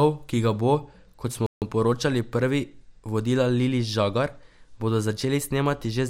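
At 1.46 s, just after "kot smo", the player most likely ran short of buffered data or had its output thread held up, so nothing reached the output until it caught up. That playback stall leaves the speech cut off mid-flow by a clean gap of silence about 0.15 s long, ending at 1.62 s. The speech then resumes where it broke off, giving a brief, jarring hitch rather than a lost stretch of audio.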